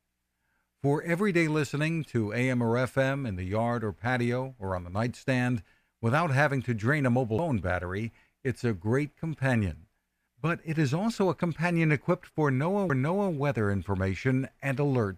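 A CD skip at 7.38 s, just after "to drain a mobile" and before "battery it's a great", and another at 12.89 s, right after "also a companion equipped". Each time the laser lost its track and landed on a different turn of the disc's spiral. The player mutes for only a few milliseconds, heard as a brief tick, and the speech then carries on from a slightly displaced point, a jump of one or more disc rotations.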